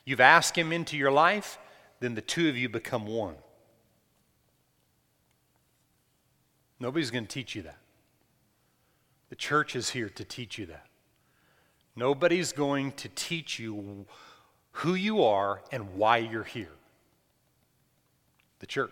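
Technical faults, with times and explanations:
No technical faults are audible in this speech.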